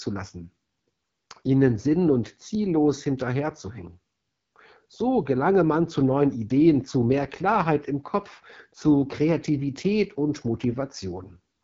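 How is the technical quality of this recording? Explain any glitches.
The quality's limited: the whole recording runs through an AMR wideband (HD Voice) codec at a low rate, and the damage is plainly audible throughout. There's nothing above about 7.2 kHz, so the top end is gone. The speech has that rough, raspy edge the codec gets near the bottom of its range, which fits the 8.85 kbit/s mode. At that rate the vocal tract model and its pulse excitation are too coarsely coded, and the band above 6.4 kHz is just shaped noise.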